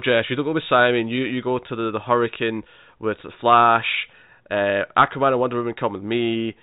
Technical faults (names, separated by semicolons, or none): none